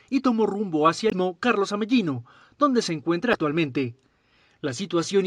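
At 1.09 to 1.13 s, a short blip cuts into the sound. It is damaged data in a compressed stream. Part of the encoded data was wrong at that point. The decoder misread those frames and lost sync. It then hunted for the next valid frame header. The result is a brief glitch lasting about 40 ms. The same fault returns at 3.31 to 3.35 s. It gives a second glitch of similar length.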